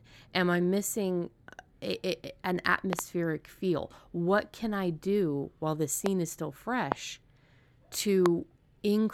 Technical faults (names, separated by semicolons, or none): loud pop